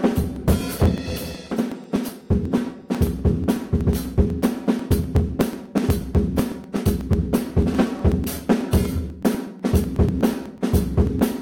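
From 0.12 s right through to 11.32 s there's a steady tick every 0.123 s, around a hundred in all. Those are periodic USB or driver dropouts: something stalls the audio path on a fixed schedule, and a couple of milliseconds get skipped outright each time.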